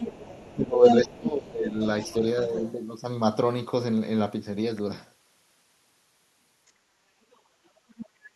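Other side's voice leaking through from 0.0 to 1.17 s: a second voice, about as loud as the talker, sits in the speech. It is likely loudspeaker sound reaching the microphone that the echo canceller failed to remove.

Speech suppressed in double talk from 0.55 to 1.79 s overlaps that leak. With both sides talking, the canceller likely couldn't separate talker from echo and turned everything down. The talker's voice dips by up to about 15 dB, for roughly a second in total.

The leak returns well below the speech at 1.82 to 2.13 s and 2.45 to 2.72 s. It is faint at 6.67 to 6.71 s and 7.33 to 7.37 s. It rises again at 7.98 to 8.06 s.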